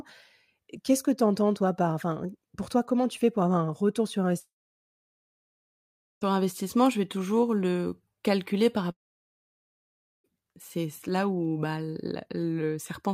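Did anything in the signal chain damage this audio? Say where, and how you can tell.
Yes, likely a long network dropout: after "avoir un retour sur" (4.39–6.23 s) and "toujours le calculer par" (8.91–10.26 s), a short fading tail drops to silence, and that audio never comes back.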